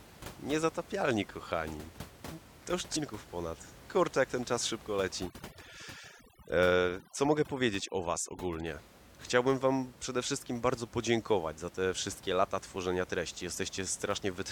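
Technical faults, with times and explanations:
2.95 s, damaged data in a compressed stream: a brief glitch marks where corrupted bytes reached the decoder. It misread the affected frame, lost synchronisation and resynchronised at the next valid frame header, so the glitch is very short and abrupt.
5.25 to 8.66 s, overdone noise removal: the room noise, about 20 dB below the speech, is stripped too hard here. Frequency bands near the noise estimate are driven to zero, leaving near-silence with twinkling specks.
12.75 s, repeated buffer: a single 5.8 ms block, which fits a 256-sample buffer, plays twice because fresh audio arrived late. With so short a segment and a hard join, the repeat is heard as a click or brief buzz rather than a stutter.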